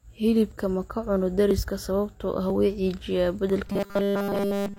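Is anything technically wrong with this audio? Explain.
Yes. The speech has two separate faults.

Audio missing between chunks occurs at 0.52, 1.51, 2.50 and 3.50 s, a steady one-second spacing. Each is a tiny skip where a few milliseconds of speech vanish and the surrounding audio butts together with no silence, leaving a small jump in the waveform. The even period likely comes from a recorder or processor handling the signal in one-second chunks and dropping a sliver at each handover.

Robotic sound from repeated short buffers runs from 3.67 s to the end. The speech becomes a rigid, metallic drone with a fixed 200 Hz buzz, roughly tracking the syllables. Essentially all of this stretch is repeated material, likely because fresh audio stopped arriving on time and the software looped the last short buffer instead. A 200 Hz buzz fits a loop about 5 ms long.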